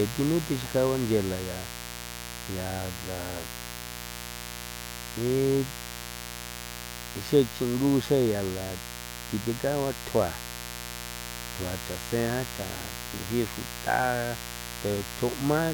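Speech runs over a steady mains buzz from start to finish, sitting only about 10 dB below the speech. It is rasping rather than a smooth low hum, because sharp spikes at each half of the 60 Hz cycle spread harmonics up into the kilohertz range.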